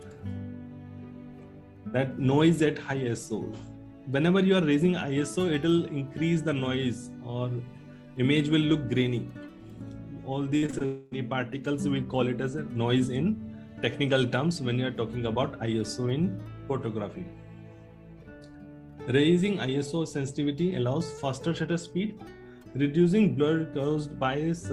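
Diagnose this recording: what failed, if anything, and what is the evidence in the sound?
Network stage: repeated packet loss (robotic sound) from 10.57 to 10.82 s. Four short holes, the longest 47 ms, are patched by repeating the last sound, so about 43% of that span is synthetic and choppy. On a spectrogram, frozen, repeated frame slices interrupt the natural texture.

From 10.85 to 11.13 s, about 260 ms of audio is replaced by a continued buzzy fill rather than silence, and roughly 7 ms is skipped when real audio resumes. This is likely a long network dropout. The waveform shows a smooth, decaying sustained segment. The spectrogram shows flat, smeared horizontal bands.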